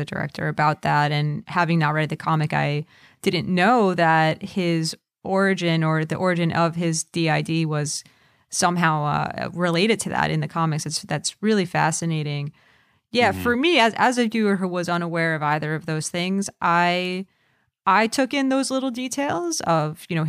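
Clock slip clicks run from 0.31 s to 20.1 s: faint, regular ticks about every third of a second, some seventy in all. Two unsynchronised clocks, likely around 70 ppm apart, each time drop or repeat a single sample.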